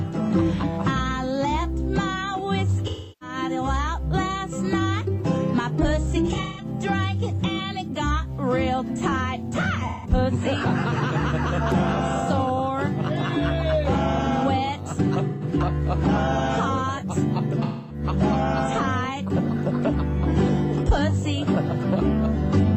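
AAC frame loss with concealment: the decoder stream dropped frames in five places, and each time the decoder filled the gap by reusing the last good spectrum. This happens at 2.87–3.36 s (about 340 ms lost), 6.24–6.65 s (256 ms, scattered, longest run around 150 ms), 9.87–10.10 s, 15.29–15.44 s and 17.63–18.04 s. Each gap sounds like a smeared, noisy or phasey patch in the audio rather than a clean break.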